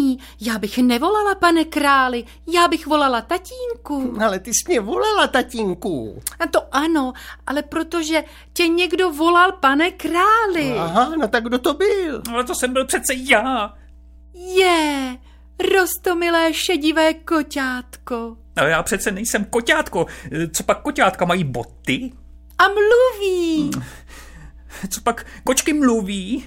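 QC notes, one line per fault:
Throughout: mains hum. A steady low tone at 60 Hz sits under the whole clip, roughly 25 dB below the wanted signal, with some low harmonics above it. This points to the power line coupling into the signal path through a ground loop or a nearby transformer. Because the hum never changes in pitch or level, it reads as a fixed drone.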